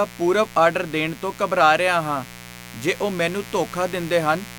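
A speech recording carrying mains buzz from start to end: switching spikes at twice 60 Hz create a raspy tone roughly 20 dB below the speech, with harmonics reaching several kHz, unlike a smooth, low hum.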